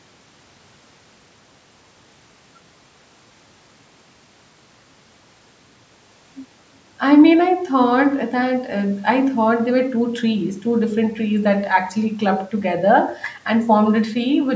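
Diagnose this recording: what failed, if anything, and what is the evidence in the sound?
Nothing in the recording has failed: the speech carries the ordinary shaping of a call's microphone processing, with the lowest bass trimmed by its high-pass filter and no content above 8 kHz, which is how that path normally behaves.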